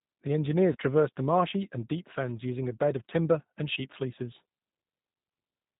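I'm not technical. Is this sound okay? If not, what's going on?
No. The call was carried by the G.729 codec, a compact phone-call format that rebuilds speech from a simplified model of the voice and discards everything above 4 kHz. Throughout the speech, that shows plainly: the voice sounds dull and a little rough, with a slightly artificial edge, because fine detail was thrown away and then reconstructed from a handful of simple ingredients.

There are also two moments of VoIP packet loss concealed by the speech codec. Small chunks of the call never arrived, about 20 ms at 0.73 to 0.76 s and about 30 ms at 3.73 to 3.79 s. The receiving end filled each gap by stretching the sound just before it, so you hear a brief smeared, buzzy or blurred patch. The voice can stay weak or distorted for a moment afterwards.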